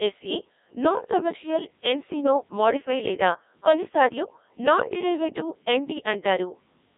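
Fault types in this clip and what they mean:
Codec 2 vocoder: The speech comes out robotic and buzzy throughout, and the damage is heavy. The band is narrow, running from about 200 Hz to 3.7 kHz with nothing above 3.8 kHz. This is a low-rate digital-radio vocoder at 1.6 kbit/s. It transmits only pitch, voicing, energy and a rough spectral envelope, then rebuilds the voice from sine waves, so the original waveform is never preserved.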